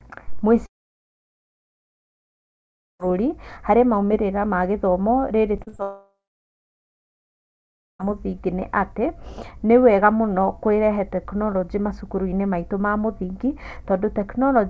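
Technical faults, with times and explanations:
0.66–3.01 s, long network dropout: roughly 2.3 s of sound simply vanishes. After a brief fading continuation of the last sound, nearly the whole stretch is silence. This is most likely a network outage in which no packets reached the receiver, and the audio resumes without the lost part.
5.57–5.80 s, repeated packet loss (robotic sound): four short holes arrive in quick succession, the longest 41 ms, and together they cover about half of this 0.23 s span. Each hole is patched by stretching the preceding sound, which gives a choppy sound with pieces missing.
5.82–8.01 s, long network dropout: immediately after the choppy patch, about 2.2 s of audio goes missing. Once a short concealment tail fades, roughly 1.9 s of silence remains. A likely renewed network outage cut the stream, and the sound returns further on with that part gone.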